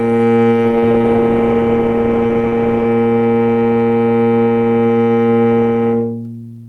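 At 0.52 s there's a call bitrate drop that lasts until about 2.93 s. The bandwidth estimate fell and the encoder was pushed to spend far fewer bits, and the sound points to a fall from roughly 64 kbps to about 24 kbps, held low for around 2.35 s. Opus codes more coarsely at that rate and trims the top end, so the audio goes rough, watery and muffled until the bitrate climbs back.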